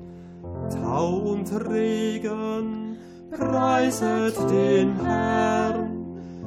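No technical faults are audible.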